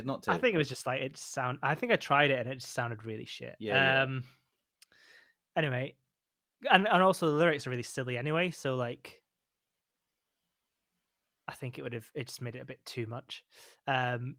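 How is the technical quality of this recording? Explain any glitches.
There is one glitch, a lost packet rebuilt from error correction, between 12.47 and 12.69 s. The speech never drops out. About 120 ms of it turns rougher and grainier, with a noisy edge, which fits six lost 20 ms packets. Each missing packet was rebuilt from a low-bitrate backup copy carried inside the next packet. The decoder played that coarser copy instead of leaving a gap, so you hear degraded speech rather than silence.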